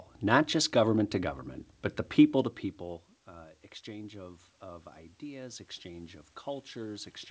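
Right after "to government but the", at 2.31 s, the input drops about 20 dB, and automatic gain rising kicks in, slowly swelling voice and room noise together through the end.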